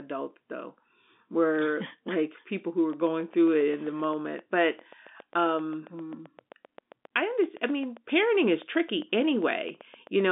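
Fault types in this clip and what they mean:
Train of clicks: from 2.93 s, just after "people who were", to 10.21 s, about fifty sharp pulses of near-identical shape tick over the speech at a steady 7.6 per second. They peak at roughly the speech's own level and carry on through the pauses. The even spacing and repeated shape set it apart from random crackle or codec dropouts. The likely source is interference from nearby equipment or a faulty connection or power supply.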